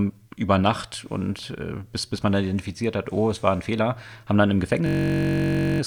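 From 4.86 to 5.80 s, a system hang loop: the system stalled while playback kept repeating one 21.3 ms buffer, likely 1024 samples, producing a steady 47 Hz buzz.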